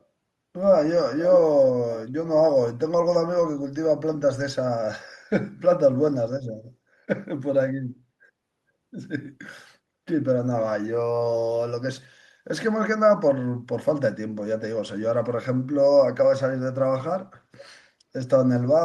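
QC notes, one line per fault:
17.58 to 17.64 s, echo leak: a faint, brief copy of the speech returns about 464 ms late, sitting roughly 25 dB below the talker. The likely cause is a far-end loudspeaker whose echo canceller let a scrap through.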